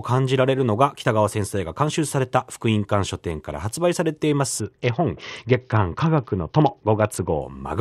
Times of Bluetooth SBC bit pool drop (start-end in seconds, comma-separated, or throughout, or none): 4.59-7.42